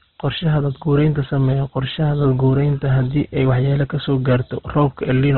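Throughout the speech, heavy Opus compression is the likely cause: a very low bitrate, consistent with about 12 kbps in CELT mode, shrinks the audio to narrowband with nothing above 4.2 kHz, so the speech comes out muffled, with a rough, grainy texture.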